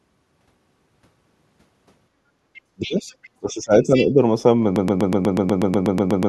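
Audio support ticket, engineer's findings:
Other side's voice leaking through: second voice at 2.54, 2.81, 3.1 and 3.83 s, roughly 15 to 30 dB under the talker. Likely residual echo the canceller missed. It is an added voice, not a loss of the talker.

Speech suppressed in double talk: talker dips about 25 dB at 2.74–3.08 s and about 20 dB at 3.36–4.2 s while the far side speaks. Likely the canceller ducking both. The near voice drops out rather than another voice appearing.

Broken-record loop: a 122 ms fragment repeats 12 times back to back from 4.76 s to the end. Likely a stalled stream resending its last buffer. Identical repeats, no new audio.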